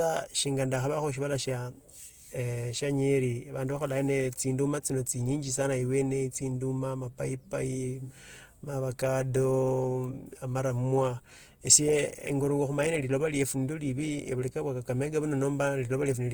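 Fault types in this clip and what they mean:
Opus compression: throughout, the speech turns plainly grainy and rough, likely from Opus's CELT mode at a rate that fits about 24 kbps. Unlike MP3's swirling holes, bands stay filled with noise, and the full bandwidth to 20.2 kHz remains.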